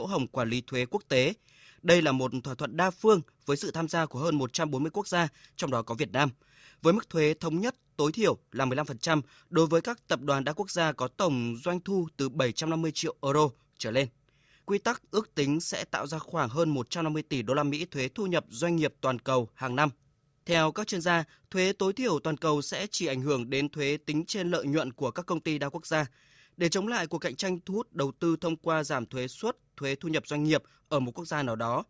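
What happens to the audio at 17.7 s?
Nothing goes wrong at 17.7 s; the speech passes through that moment intact, with no dropout, click or distortion.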